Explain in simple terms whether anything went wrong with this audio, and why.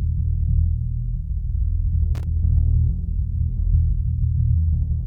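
Yes, something goes wrong briefly. At about 2.15 seconds into the music, a short, rough burst of crackling and scratching cuts in and is gone by 2.24 seconds, lasting under a tenth of a second. This is loose connector crackle. A worn or dirty contact in a plug or socket lost and regained its grip several times in quick succession, chopping the signal on and off.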